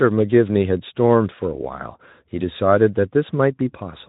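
Nothing is technically wrong with this speech clip; there are no faults to point to at any time.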